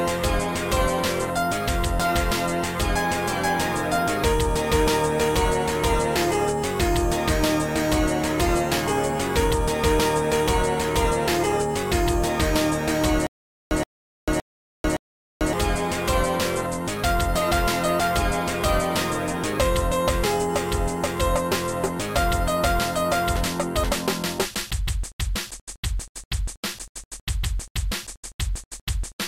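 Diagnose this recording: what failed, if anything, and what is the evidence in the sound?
From 13.27 to 15.53 s the sound stutters with silent gaps: a fragment of about 124 ms plays, then falls into digital silence for about 443 ms, and the same burst returns four times at an even 566 ms spacing. The stall likely sits at the playback or streaming buffer: each retry replays the last fragment it holds, then runs empty. Whatever audio belonged in that stretch is gone rather than delayed.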